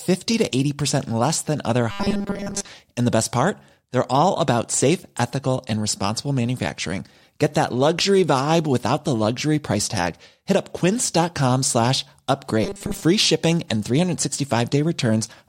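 Speech clip with two stretches of robotic sound from repeated short buffers, from 1.91 to 2.68 s, just after "less than other", and from 12.64 to 13.04 s, just before "shipping and". In both, the voice collapses into a rigid metallic buzz at 200 Hz that only loosely tracks the speech. The likely cause is audio arriving too slowly, with the player looping a roughly 5 ms fragment to cover most of each gap while the real signal is dropped.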